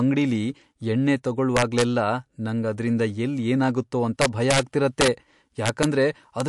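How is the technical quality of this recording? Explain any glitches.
The recording has two clear problems: codec damage throughout, and several overflow cracks.

The whole clip has a watery, swirly texture with nothing above 11.3 kHz. That's likely MP3 compression at a low bitrate, around 55 kbps.

Integer overflow shows up at 1.57–1.82 s just after "ಅಂಗ್ಡಿಲಿ ಎಣ್ಣೆ", at 4.22–4.59 s after "ಅದ್ರಿಂದ ಎಲ್ಲ್ ಏನಾಗತ್ತೋ ಅಂತ", and at 5.01–5.08, 5.66–5.84 and 6.40 s. Peaks pushed about 3 to 4 dB past the limit (0 dB at 6.40 s) wrap to the opposite sign, so you hear sharp cracks rather than soft clipping.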